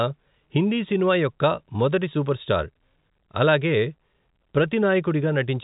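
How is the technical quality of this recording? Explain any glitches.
No glitches can be heard anywhere in this recording.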